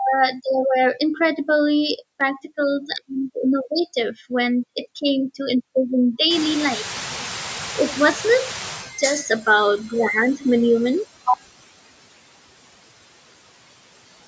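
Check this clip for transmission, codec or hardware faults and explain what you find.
Two faults are audible, both from the call's noise suppression rather than from transmission, codec or hardware.

Noise suppressor artifacts run through the whole clip. The suppressor estimates which frequency bands hold steady background noise and turns each of them down frame by frame, here by about 20 dB. Because the reduction eases whenever speech fills those bands, the background drops away in the gaps and comes back up beneath the talking.

Noise suppressor catching up occurs from 6.30 to 8.93 s. Shortly after 6 s the room noise jumps sharply, by about 23 dB, and the suppressor's noise estimate still reflects the quieter background from before. For roughly 2.6 s the louder noise comes through with too little reduction. As the estimate adapts to the new level, the noise sinks again, ending up about 15 dB lower by 8.93 s. 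The audible result is a noisy swell that gradually fades out.

The room noise itself is part of the recording and not a system fault. The lack of any content above 8 kHz comes from the normal call microphone processing.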